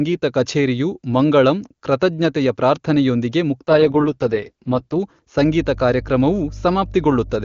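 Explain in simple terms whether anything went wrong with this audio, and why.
Two things went wrong. From 3.68 to 4.99 s, just after "ಕಛೇರಿಯು ಮಂಗಳಂ ಕೃತಜ್ಞತೆಯ ಪ್ರಾರ್ಥನೆಯೊಂದಿಗೆ", there is an AMR rate drop. The phone network briefly squeezed the speech into far fewer bits. The voice turns rough and raspy, then recovers.

From 5.37 s to the end, mains hum appears. Electricity from the power line leaked into the recording. It sounds like a steady low buzz at 50 Hz sitting under the speech. It never stops before the clip ends.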